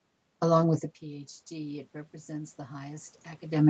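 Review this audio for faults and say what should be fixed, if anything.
Automatic gain rising runs from 1.0 s, just after "with the", to the end. The talker moved back and the input fell by about 17 dB. The gain control climbed slowly, swelling voice and room noise together. To prevent it, cap the maximum gain boost.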